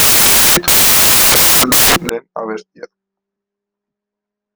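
From the start to 2.09 s, the speech is swamped by loud, harsh broadband noise. The samples are built from the wrong bytes. Each value is assembled misaligned or byte-swapped, so the busy low bits become the loud part.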